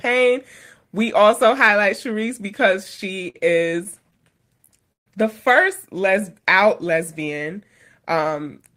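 Speech runs with repeated stalls (stutter) from 2.83 to 5.09 s, just before "the first": the jitter buffer emptied 18 times, and the receiver stretched the last sound to fill each wait, the longest 142 ms, totalling 369 ms. Unlike packet-loss dropouts, nothing is missing; the sound drags rather than skips. From 6.01 to 7.36 s, after "the first", a jitter buffer slow-down repeats pitch periods to rebuild its reserve, adding 92 ms and playing at 94% speed. The pitch stays unchanged, unlike a sample-rate or clock slowdown, which would lower it.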